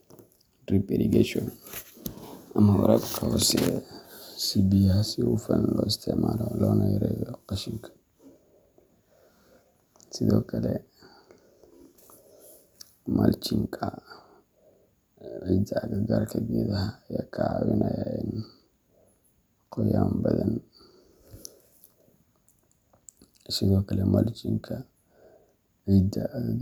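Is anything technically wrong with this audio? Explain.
No, no technical faults here.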